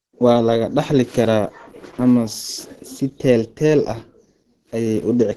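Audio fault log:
Throughout: Opus compression. The speech has nothing above 12.1 kHz, and the codec damage is plainly audible as a muffled, hoarse quality. This likely comes from an Opus encoder in its hybrid mode, where a speech-oriented coder handles the lower band and a transform coder fills in the upper band up to the super-wideband limit. With so few bits, which fits a rate around 16 kbps, fine detail is coarsened and the top octave is cut away.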